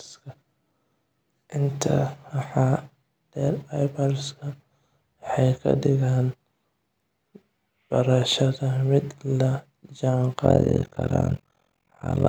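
Overlap-add ripple affects this speech from 10.45 s to 12.28 s: mistuned frame overlap makes the level swing by about 60 dB around 40 times per second, a harsh robotic flutter.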